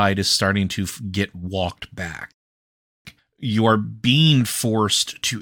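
A rebuffering stall hits this speech clip from 2.32 to 3.05 s, just after "starting to get walked": playback ran dry, fell silent for about 0.73 s, then resumed exactly where it stopped.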